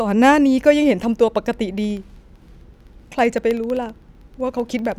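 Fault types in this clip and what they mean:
Periodic USB or driver dropouts: a bus or driver stall blanks a fraction of a millisecond every 64 ms, ticking regularly through the speech from 1.78 s.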